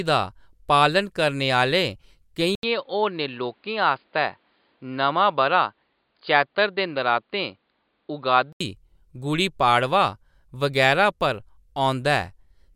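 At 2.55 s the speech cuts out for 80 ms, then returns dull and boxy, with nothing above 4.9 kHz. Faint new background noise appears. Loudness holds steady. The likely cause is an input switched to a poorer device. Clarity returns at 8.6 s.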